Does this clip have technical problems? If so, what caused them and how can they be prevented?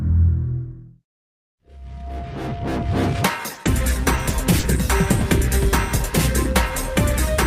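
Yes. Between 3.53 and 4.75 s there's repeated packet loss, the robotic-sounding kind. Five short holes open up in quick succession, the longest about 40 ms, and each one gets papered over by stretching the last bit of sound. Together the holes amount to 140 ms of missing audio, roughly a tenth of that stretch, so it comes out choppy. A steadier network path, or a larger jitter buffer with forward error correction, would prevent it.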